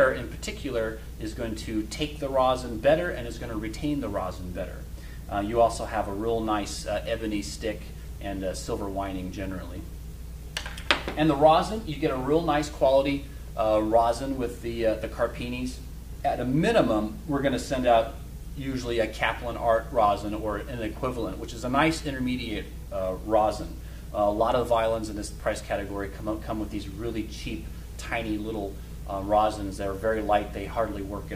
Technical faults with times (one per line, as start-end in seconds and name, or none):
none